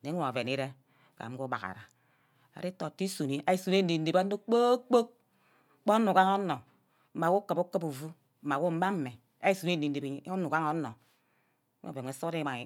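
Nothing in the recording stands out as a technical fault; it's just steady speech with nothing going wrong along the way.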